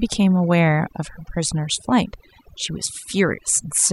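From start to end, the speech shows overdone noise removal. The noise reducer was set too hard. It cut individual frequency bands whenever they sat near its noise estimate, taking quiet parts of the voice too. In pauses the background drops, flecked with glittery chirps.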